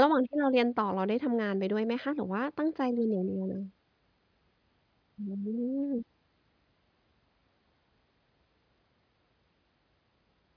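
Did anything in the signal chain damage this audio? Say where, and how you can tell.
No, none of the stages between capture and playback left any audible mark of damage on this speech recording.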